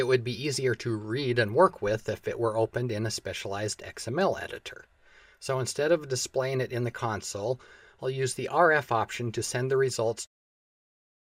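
No technical faults; the ending fades out smoothly.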